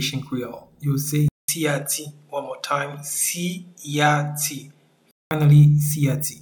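At 1.28 s there's a 200 ms gap, then the sound comes back duller, with nothing above 13 kHz, a bit quieter, and carrying a faint new noise floor. That's likely the input switched to a poorer device, and it switches back at 5.31 s.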